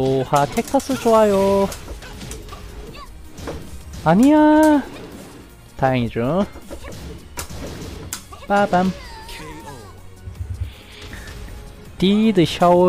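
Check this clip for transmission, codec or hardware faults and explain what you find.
Overlap between stream segments occurs twice, at 2.49 s and 8.47 s, about 6 seconds apart, matching the segment length. Adjacent segments carry overlapping time stamps. The player trims a few milliseconds of real sound. The waveform jumps, producing a brief click or skip.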